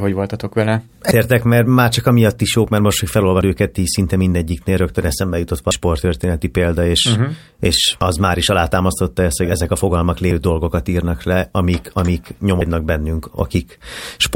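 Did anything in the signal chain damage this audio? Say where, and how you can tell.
Yes: audio missing between chunks at 3.41, 5.71, 8.01 and 12.61 s, likely from recorder buffering, each dropping about a fifth of a second; waveform shows abrupt seamless splices.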